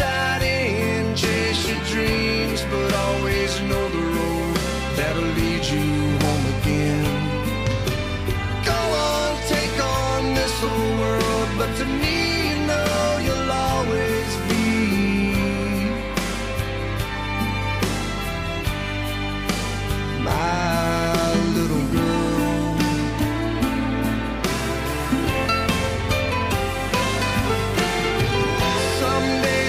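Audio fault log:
No audible technical problems were found anywhere in this audio.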